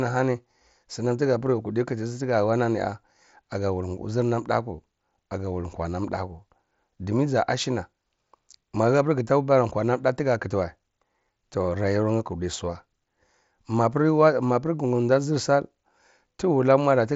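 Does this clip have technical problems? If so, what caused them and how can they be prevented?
No, the speech arrives over a Bluetooth mSBC headset link working as designed, with its bandwidth topping out near 7.7 kHz, and there is nothing here to diagnose or prevent.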